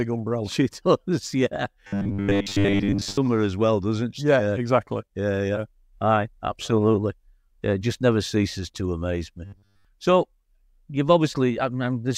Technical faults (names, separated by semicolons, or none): robotic sound from repeated short buffers